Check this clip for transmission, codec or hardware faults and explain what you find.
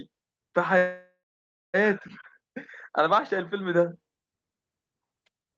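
One transmission fault is audible. From 0.77 to 1.76 s there is a call audio freeze. The speech stops and a fading fill runs for about 0.96 s, ending in roughly 0.57 s of silence. The likely cause is delayed packets draining the jitter buffer. The speech then resumes where it stopped, so nothing is lost, but everything after it arrives later.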